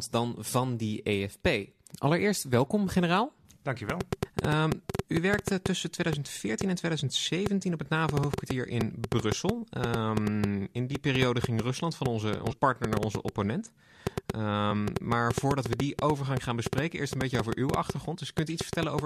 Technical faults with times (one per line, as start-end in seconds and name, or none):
3.90-19.00 train of clicks
7.78-7.82 compressed frames skipped
12.42-12.54 compressed frames skipped